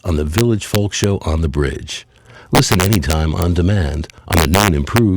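Violent, sharp cracks break out on the loud peaks from 0.38 to 1.04 s, 2.55 to 3.42 s and 4.33 to 4.98 s, far harsher than ordinary clipping. This is integer overflow: the signal was pushed right to full scale in the first stretch and about 2 dB past it in the later two, and instead of being limited, each peak that exceeds the largest integer wraps around to the opposite sign, slamming across the full range.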